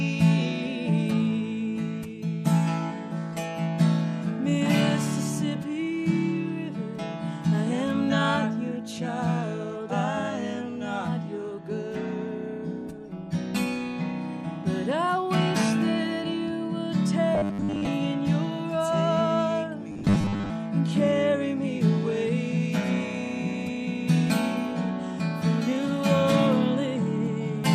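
Robotic sound from repeated short buffers appears from 17.35 to 17.87 s and again from 19.92 to 20.50 s. In both stretches the audio turns into a rigid, metallic buzz fixed at 100 Hz. The likely cause is new audio arriving too seldom, so the playback loops a roughly 10 ms slice, the period that matches that pitch. Most of each stretch is made of these repeats, and the skipped material between them is lost.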